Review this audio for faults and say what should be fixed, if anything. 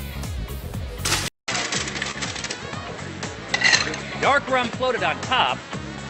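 At 1.28 s the input appears to switch to a poorer device. There is a gap of about 200 ms. After it, nothing is heard above 8 kHz. The level shifts by roughly 5 dB, and a new noise floor sits well below the signal. The cause is likely a switch to another microphone or a headset profile. Pinning the input device would prevent it.

A short concealed packet loss occurs at 2.11 to 2.16 s. About 20 ms of audio never arrived. The receiver covered 26 ms by extending the preceding sound and then blending back in, which leaves a brief smear. A larger jitter buffer would prevent it.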